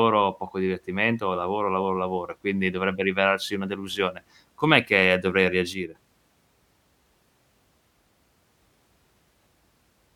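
One channel drops out from 5.74 to 5.95 s, right after "delusione com'è che dovrei". For about 0.21 s the speech falls abruptly by about 6 dB and then snaps back to its earlier level. The likely cause is that one side of the stereo feed went silent while the two channels were being summed to mono, so the material shared by both was carried by a single channel and lost half its level until the missing channel returned.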